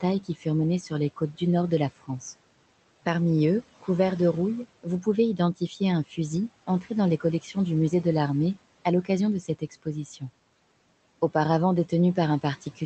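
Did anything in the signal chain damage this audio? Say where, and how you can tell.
Yes: speech cut by the noise suppressor at 0.01–2.22 s, 4.83–10.23 s and from 11.89 s onward. Call processing mistook soft speech for noise, swallowing it by up to about 16 dB.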